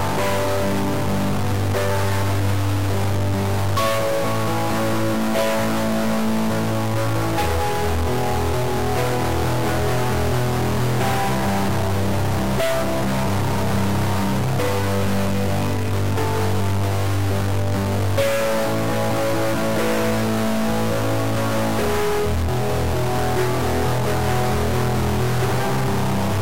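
A stuck bit runs through the whole clip, from start to finish, laying a harsh, buzzy distortion over the sound. The likely cause is one data bit held permanently at 0 or 1 by a broken line or converter, so about half of all sample values are shifted by a fixed step of about -20 dBFS, following the waveform. Because that bit also flips with the sign of small values, quiet passages fill with a steady, fairly loud noise.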